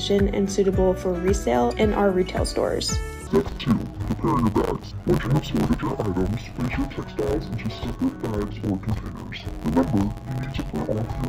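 From 3.27 s to the end, interleaved audio is being read as planar: each 10.88 ms block of alternating left and right samples is split into halves and played as two channels. With blocks this short, the sound turns dull and robotic, buzzing at about 92 Hz without a clear octave drop.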